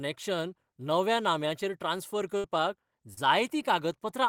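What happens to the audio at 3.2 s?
Just before 3.2 s, from 3.14 to 3.18 s, the speech has a short concealed packet loss. About 30 ms of audio didn't reach the decoder in time, and the receiver filled roughly 29 ms of the gap by extending the preceding sound, carrying its pitch forward if voiced or shaping noise if not, then crossfading back into the real signal. The result is a brief smeared or wobbling blip in the speech.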